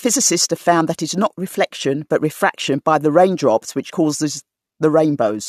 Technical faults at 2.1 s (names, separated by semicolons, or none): none